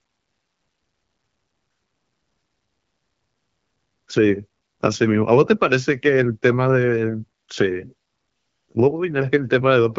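No technical faults can be heard anywhere in this speech.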